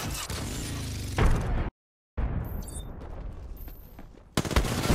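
At 1.69 s the audio stops mid-flow and stays silent until 2.18 s, a gap of about 0.49 s. This is a playback stall, most likely caused by the player running out of buffered data or its output thread being blocked. Unlike a short dropout or a single lost packet, which leaves only a click or a few milliseconds of silence, a stall holds a clear half-second hole before the sound resumes. From 2.18 s to 4.88 s the audio runs about 1.15 times faster than normal. This is time-compressed catch-up, in which the player cuts small pieces out of the backlog and cross-fades across the joins to get back to its schedule. The pitch stays where it was, and that is the distinction from a simple faster playback rate, which would raise the pitch in step with the speed-up.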